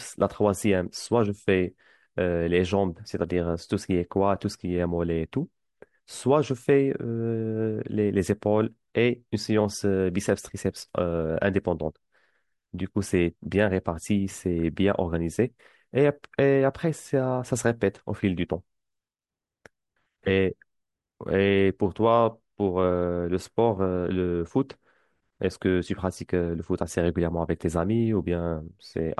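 Listening closely to the recorded speech, nothing stood out as a technical problem at any point.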